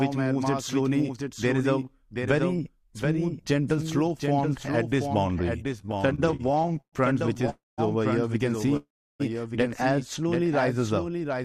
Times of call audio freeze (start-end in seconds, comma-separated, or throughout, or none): 7.50-7.80, 8.77-9.22